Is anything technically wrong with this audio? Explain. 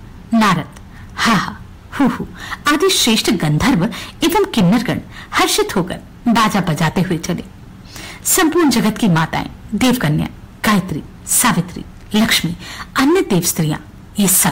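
Yes. Hard clipping runs throughout: the level is pushed about 18 dB beyond what the stage can pass, so roughly a sixth of the waveform is sliced flat at the ceiling. Those squared-off tops add harsh high harmonics, heard as a constant gritty fuzz on every loud moment.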